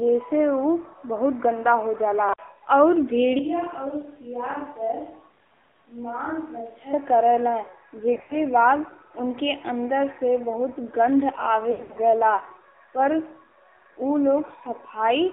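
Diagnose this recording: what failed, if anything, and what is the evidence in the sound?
Codec stage. The AMR narrowband mobile codec shapes the whole speech clip. The band runs only from about 150 Hz to 3.6 kHz. The voice sounds buzzy and synthetic, with plainly audible codec damage. That fits a low mode near 7.4 kbps, with few pulses per subframe.

Capture stage. From 3.39 to 6.93 s the voice turns roomy and hollow, with thinner bass. Level drops by about 10 dB. Room noise rises to about 30 dB below the speech. Both changes are abrupt. The likely cause is a switch to a distant microphone.

Network stage. There are lost AMR speech frames at 8.14 to 8.40 s and 11.72 to 11.98 s. The first gap removes 120 ms of sound across 160 ms. The second removes 200 ms across 240 ms. Neither run exceeds 80 ms. The decoder repeats old parameters with fading gain, so the sound smears, warbles and dips.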